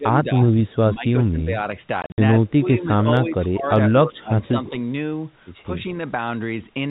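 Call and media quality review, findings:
Speech suppressed in double talk: level dips and thins at 0.00–0.44, 0.94–1.73, 2.29–3.72, 3.92–4.37, 4.56–4.76, 5.64–5.78 s, deepest about 20 dB near 4 s. Likely echo canceller mistaking near-end talker for loudspeaker echo during overlap, attenuating both.

Packet loss filled with silence: hard-edged dropouts between 2.02 and 2.18 s, about 120 ms of audio missing across 160 ms, longest gap 60 ms, spacing fits 20 ms packets. Receiver inserting silence for lost packets, no concealment. Telephone band limited to 4 kHz.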